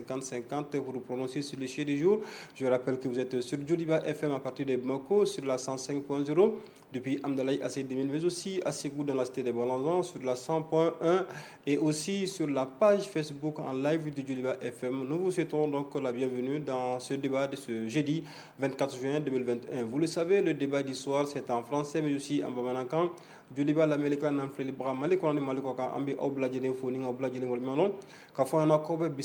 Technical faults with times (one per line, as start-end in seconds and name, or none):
none